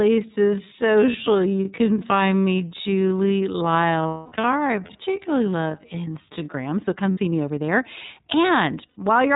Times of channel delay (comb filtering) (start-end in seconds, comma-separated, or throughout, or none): none